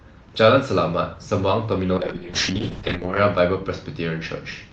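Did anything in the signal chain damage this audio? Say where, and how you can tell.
Yes. A call bitrate drop at the network and codec stage: from 1.99 s to the end the sound turns coarse and watery, worst for about 1.2 s. This fits a bandwidth estimate collapsing from 32 to 7 kbps, starving the Opus encoder of bits.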